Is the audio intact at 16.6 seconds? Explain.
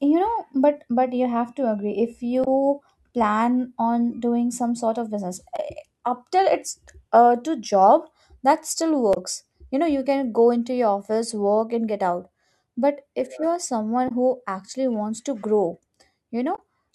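No. From 16.55 to 16.59 s the speech hits damaged data in a compressed stream. The decoder misreads corrupt frames, loses sync and hunts for the next header, giving a brief chirp, squawk, click or short hole, unlike a dropout's plain silent gap.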